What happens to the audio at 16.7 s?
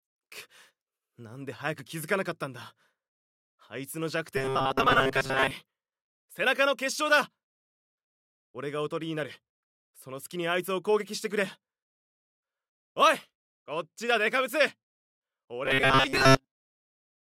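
From 15.66 s to the end, robotic sound from repeated short buffers: a rigid, metallic 133 Hz buzz, likely from repeating roughly 7.5 ms buffers in place of most of the audio.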